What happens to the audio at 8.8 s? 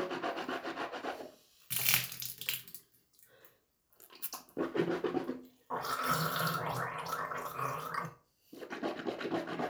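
Nothing goes wrong at 8.8 s: the audio there is intact, with no fault at that moment.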